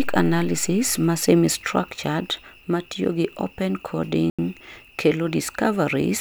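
From 4.30 to 4.39 s the speech drops to about 86 ms of silence, then resumes: a Bluetooth stall, likely from interference delaying packets until the headphone buffer emptied. The waveform shows a flat gap; the spectrogram, a blank vertical band across all frequencies.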